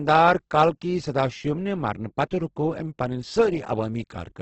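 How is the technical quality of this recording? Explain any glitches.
The quality is poor, with heavy coding damage throughout. Opus compression, likely in its music mode at a rate around 12 kbps, fills starved bands with noise, making wideband speech grainy rather than MP3-swirly.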